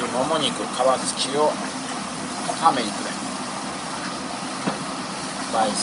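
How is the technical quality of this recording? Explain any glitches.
Nothing here trips me up; I can't hear any glitches or technical faults anywhere in the recording, so there's nothing to explain.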